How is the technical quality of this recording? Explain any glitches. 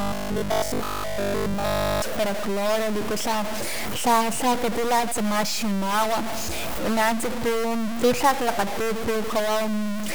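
The technical quality is poor: a distortion runs through the whole speech clip, and its opening two seconds are badly mangled.

Stuck bit, throughout: the distortion and the noise filling the pauses likely come from one data bit stuck at a fixed value. That throws roughly half the samples off by that bit's weight, and the bit flips with the sign of quiet passages.

Robotic sound from repeated short buffers, 0.02 to 2.02 s, ending just before "para cloro liku": new audio likely arrived too seldom, so the playback repeated the same short fragment, about 20 ms long, to fill the gaps. Most of the real audio was skipped, leaving a rigid, metallic 50 Hz buzz that only roughly tracks the speech.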